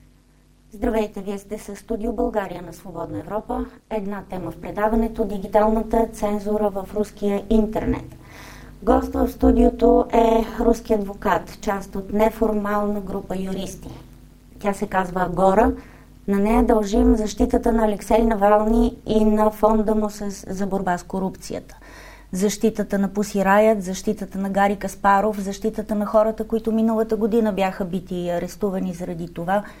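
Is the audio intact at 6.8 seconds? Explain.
No. At 6.8 seconds the audio sits inside a stretch of overlap-add ripple running from the start to 20.87 s. The signal was split into windowed frames and rejoined with overlaps whose gains fail to sum evenly, so the level dips and swells with every frame, here around 200 times a second and by about 60 dB. That deep, fast modulation gives the sound a harsh, metallic buzz with extra tones around each note.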